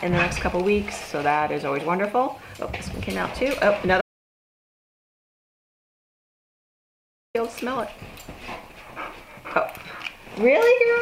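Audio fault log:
4.01–7.35 s, audio dropout to silence: the sound cuts off mid-flow into dead silence for about 3.3 s, no room tone at all, likely a lost input link.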